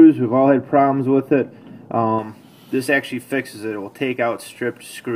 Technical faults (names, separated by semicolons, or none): de-emphasis applied wrongly